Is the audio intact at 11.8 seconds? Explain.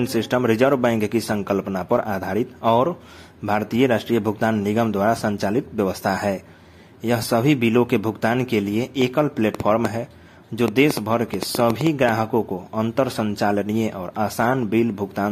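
No. At 11.8 seconds the audio sits inside a train of clicks running from 9.02 to 12.10 s: about fifteen similar pops at an uneven 4.56 per second, some 15 dB above the sound, likely from interference. They show as thin vertical broadband lines on a spectrogram and sharp spikes on the waveform.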